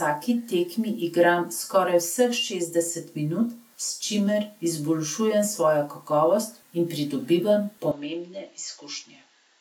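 From 7.91 s, right after "in pridobivam", the speech turns duller and a few decibels quieter, losing everything above 7.6 kHz, with a faint new noise floor and no gap at the change. The likely cause is an input switched to a poorer device.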